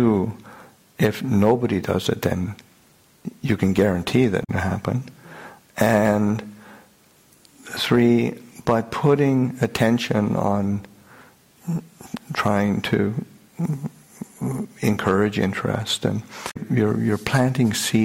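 Damaged data in a compressed stream appears twice, from 4.40 to 4.50 s and from 16.47 to 16.57 s, each lasting roughly a tenth of a second. In both places the compressed data was corrupted, so the decoder misread those frames, lost sync, and hunted for the next valid frame header before resuming. What reaches the ear is a short, harsh chirp or squawk that breaks into the sound and then clears.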